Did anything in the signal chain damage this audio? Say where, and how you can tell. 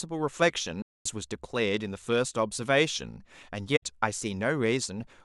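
Yes: AAC frame loss with muting at the codec stage, 0.82 to 1.06 s and 3.76 to 3.83 s. The decoder zeroed the missing frames' spectra, so the speech fades out and back in. A spectrogram shows blank full-band gaps with tapered edges.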